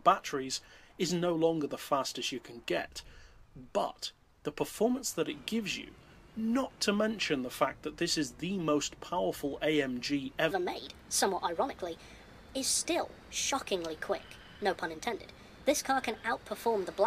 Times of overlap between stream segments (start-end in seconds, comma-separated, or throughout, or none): none